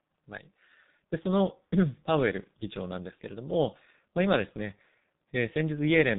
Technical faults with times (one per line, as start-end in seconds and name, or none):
0.00-6.19 G.723.1 codec